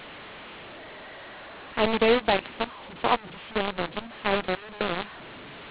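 Throughout the speech, a mu-law and A-law mix-up: samples coded as A-law are decoded as mu-law, scrambling levels. Loud passages turn harsh and distorted, and pauses fill with hiss. The waveform shows a raised noise floor between phrases, and the spectrogram smears energy below the telephone band's 4 kHz ceiling.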